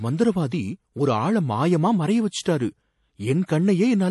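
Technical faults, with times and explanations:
Throughout, MP3 compression: the speech sounds watery and swirly, with nothing above 11.5 kHz. The likely cause is a bit-starved MP3 encode, fitting 48 kbps, which cuts the treble at a fixed point and flicks weak frequency lines on and off between frames.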